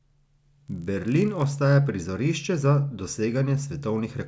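From the start to 1.5 s, just before "prizorišče za", a low, rough buzz rides on the speech, a steady 50 Hz pattern of tiny ticks that follows the signal and drops away in its gaps. This is a resampler restarted on every block: the 48 kHz to 16 kHz conversion ran on each 20 ms block in isolation, so at every block edge the filter lacked the true neighbouring samples and left a small error, repeating 50 times a second.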